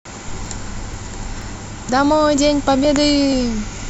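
Short skips interrupt the speech at 0.46, 0.94, 1.42, 1.89, 2.37, 2.85 and 3.32 s, each a tiny jump where roughly 20 ms vanishes. This is audio missing between chunks, likely from a recorder dropping a sliver at each roughly half-second chunk boundary.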